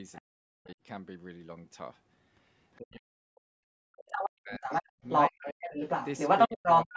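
From 0.13 to 0.21 s a faint second voice, well below the talker, slips in: other side's voice leaking through, likely loudspeaker echo the canceller left in the microphone signal. Unlike suppression, this adds sound rather than removing it.

From 0.2 to 0.79 s the talker's own voice sinks deeply in places while the far end is active. This is speech suppressed in double talk, likely the canceller ducking everything when both sides overlap.

The same suppression returns from 2.77 to 5.79 s, gouging out roughly two seconds of the talker in deep dips. The leaked voice reappears from 4.07 to 4.3 s at about the talker's level, then from 4.61 s to the end it sits louder than the talker. Within that stretch, from 6.48 s to the end, the talker is pushed down again.

The whole call band tops out at 8 kHz.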